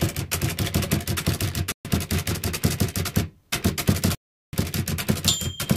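At 1.72 s the sound drops to silence for about 0.13 s and resumes at 1.85 s; a second, longer gap runs from 4.15 s to 4.53 s, about 0.38 s. Each break is a hard cut to silence followed by a clean restart. This pattern is likely a Bluetooth stall: radio interference delayed packets, the headphones' buffer emptied, and playback halted until retransmitted data arrived, so the audio resumes without any fade.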